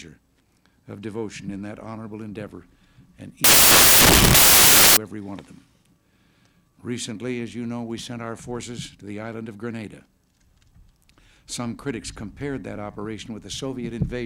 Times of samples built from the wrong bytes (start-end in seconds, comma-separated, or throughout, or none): 3.44-4.97